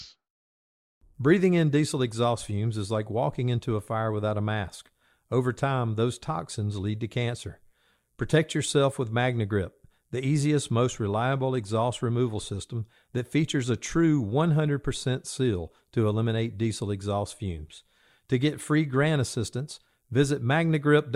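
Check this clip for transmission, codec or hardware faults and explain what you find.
Nothing in the speech points to a transmission, codec or hardware fault.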